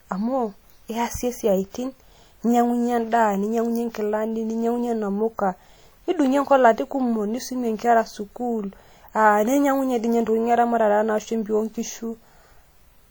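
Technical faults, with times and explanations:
Throughout, WMA compression: ringing, washy smearing and a hiss breathing with the speech, likely from transform coding at a bitrate that fits 48 kbps.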